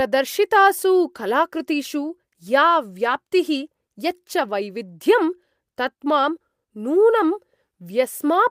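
A speech recording with no technical faults audible anywhere in it. There is nothing to time or trace to a cause.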